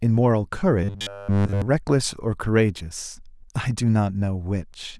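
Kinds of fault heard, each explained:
Robotic sound from repeated short buffers: From 0.84 to 1.62 s the speech becomes a rigid metallic buzz at 100 Hz, likely from a 10 ms chunk looping while fresh audio is skipped; spectrograms show evenly spaced harmonic lines, waveforms an identical repeating cycle.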